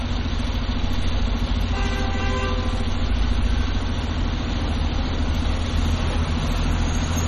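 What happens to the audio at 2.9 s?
MP3 compression damage runs throughout, 2.9 s included: likely a bit-starved encoder, removing everything above 13.5 kHz and leaving weak detail swirling and watery.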